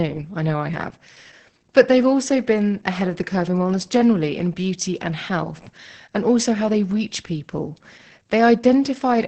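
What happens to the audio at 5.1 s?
At 5.1 s the speech is under Opus voice compression, as it is for the whole clip. The SILK coder keeps only a wideband signal with nothing above 8.7 kHz and coarsely codes the excitation, which fits roughly 10 kbps, leaving it muffled, hoarse and slightly robotic.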